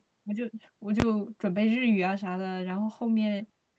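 A speech clip carried over a call codec, with the top end limited to about 8 kHz. At 1.0 s there is a single loud bang: invalid numbers at full scale, where a 20 ms block of broken values was pinned to maximum output.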